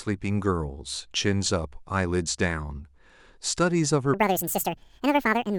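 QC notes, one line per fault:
4.14–5.59 s, section at the wrong speed: the speech runs 1.85 times too fast and rises roughly ten semitones, likely from being played against the wrong clock.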